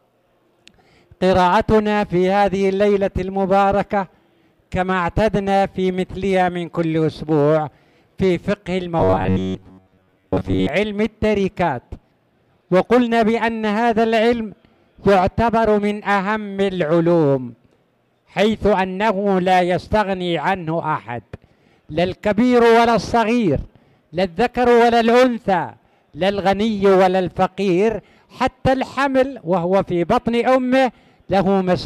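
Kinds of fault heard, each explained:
Robotic sound from repeated short buffers: from 8.99 to 10.69 s a stiff metallic buzz near 94 Hz takes over, likely from an 11 ms segment replayed whenever fresh audio arrived late. Unlike a dropout, nothing goes silent, and the rough contour survives.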